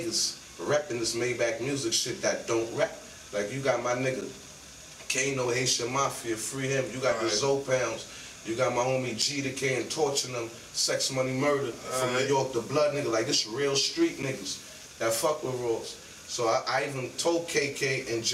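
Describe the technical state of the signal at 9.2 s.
At 9.22 s there is a gap between chunks: a 6.5 ms stretch of silence inserted where two 5.0 s chunks of the stream join. Nothing is missing; the sound simply stops and resumes, heard as a brief hole.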